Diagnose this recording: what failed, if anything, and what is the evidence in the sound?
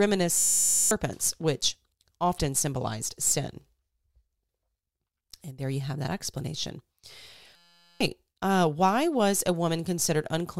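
System hang loop in the driver buffer: 0.37–0.91 s and 7.56–8.01 s buzz at 172 Hz, one 5.8 ms fragment replaying, fitting a stalled 256-sample ring buffer.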